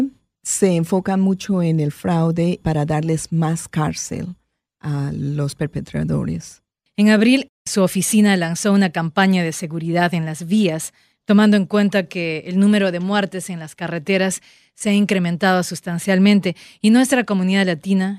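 Two brief buzzy clicks break into this speech recording, one at 5.51 s and another from 14.79 to 14.81 s. Both are repeated buffer faults. New audio failed to reach the output in time, so the device replayed its last block several times with a hard join at each repeat. The buzz pitch suggests a block of about 5 ms, replayed three times at the first point and four at the second, dropping roughly 15 ms and 20 ms of speech.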